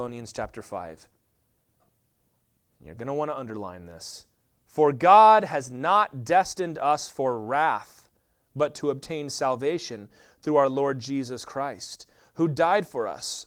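No technical faults can be heard anywhere in this speech.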